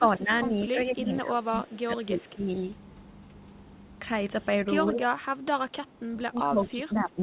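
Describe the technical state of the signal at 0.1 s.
At 0.1 s the speech is pulled down, by roughly 10 dB at its deepest. This runs from 0.0 to 0.32 s, about a fifth of a second affected in all. It is speech suppressed in double talk, likely an echo canceller ducking the talker alongside the echo. Above this, the band stops at 4 kHz.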